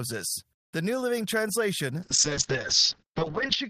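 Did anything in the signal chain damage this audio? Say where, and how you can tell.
Yes. A call bitrate drop hits the codec stage from 2.03 s to the end. The speech turns coarse and muffled, with the top end cut off at 8 kHz instead of 20 kHz. That fits the encoder falling from about 32 to 7 kbps after the bandwidth estimate fell, and the bitrate stays at its lowest for the final 1.52 s.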